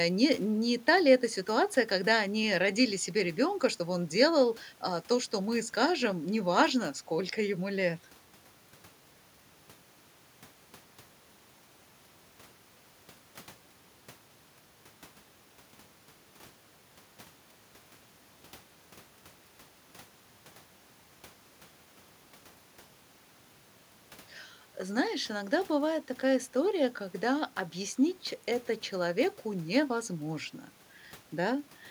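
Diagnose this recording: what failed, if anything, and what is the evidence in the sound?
Nothing failed; no fault is audible in this recording.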